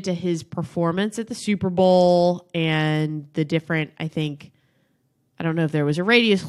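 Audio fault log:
4.65–4.68 s, frames out of order: just after "the different I think", two neighbouring frames of about 23 ms each play swapped, giving a brief garbled flutter with no time lost.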